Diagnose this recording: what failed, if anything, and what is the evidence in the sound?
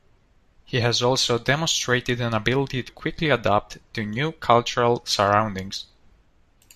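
Compressed frames skipped at 2.88 s, a codec-stage fault. The speech jumps forward by around 70 ms, which fits about three whole frames of roughly 21.3 ms each going unplayed, either missing from the file or rejected by the decoder as damaged. The evidence is the audible jump at the join.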